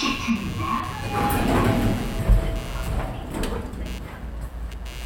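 Throughout, a scratchy buzz pulsing near 150 times a second sits about 20 dB down: computer activity noise, from load changes upsetting the audio ground.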